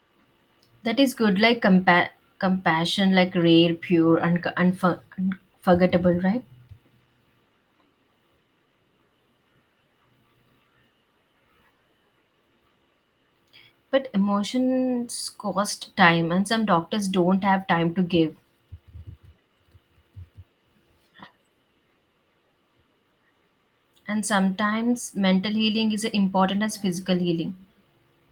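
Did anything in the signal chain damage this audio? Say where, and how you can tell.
No, nothing in this speech stood out on listening as damage from any stage of the signal chain.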